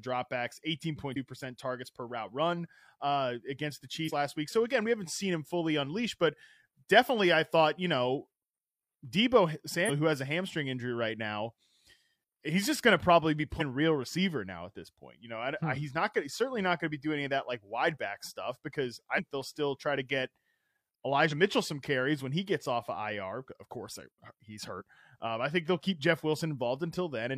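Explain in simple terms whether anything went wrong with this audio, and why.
The speech skips forward at 1.12, 4.04, 9.85, 13.56, 19.14, 21.27 and 24.76 s, for example just before "last week". These are compressed frames skipped: chunks of roughly one to three 46.4 ms frames never got played, so short bits of speech vanish.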